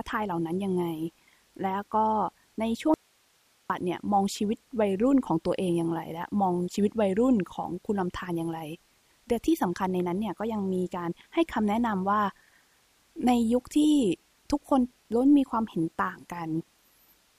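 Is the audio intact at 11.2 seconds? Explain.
Yes, the speech at 11.2 seconds plays through intact, with no dropout, click, distortion or other technical fault at that moment.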